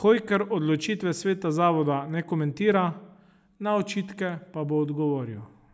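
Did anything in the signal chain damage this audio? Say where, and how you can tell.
No, nothing along the way seems to have knocked this speech about; it comes through intact, with nothing I'd flag at any stage of the chain.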